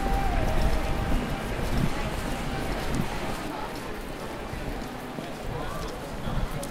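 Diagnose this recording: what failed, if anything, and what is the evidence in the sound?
A second, equally loud copy of the sound trails the original by about a second from the very start until it cuts off abruptly at 3.48 s. It has no decay or room colour. This doubled audio track is likely a capture or editing stage holding two out-of-step copies.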